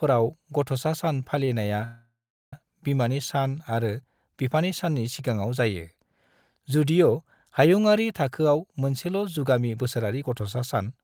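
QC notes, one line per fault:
1.45 to 1.49 s, short stall from a late packet: a packet arrived late, so the last sound was stretched about 22 ms, then resumed without loss.
1.85 to 2.53 s, call audio freeze: sound holds as a fading buzz, then about 0.38 s of silence, before resuming where it stopped; likely delayed packets emptying the jitter buffer.
8.39 to 10.99 s, jitter buffer speed-up: excess buffered audio was trimmed in repeated pitch-period cuts, roughly 0.2 s overall, so speech runs about 9% faster at unchanged pitch.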